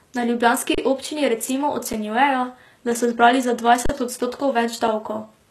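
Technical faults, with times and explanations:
Throughout: HE-AAC compression, likely at a low bitrate around 16 kbps. Nothing survives above about 12.3 kHz, and the treble there is rebuilt by copying lower bands upward, so its harmonics fail to line up and sibilants come out gritty and metallic, with plainly audible codec damage.
0.75 s, 1.93 s, 3.86 s and 4.88 s: underrun with held sample. The output buffer ran dry and the converter froze on its last value, flattening the waveform for 32 ms before "občini recimo", 7 ms after "ljubljanski občini recimo", 35 ms after "da so zbrali za", and 5 ms near the end. Playback then resumed where it stopped, losing no audio, so each gap is a brief freeze rather than a sharp click.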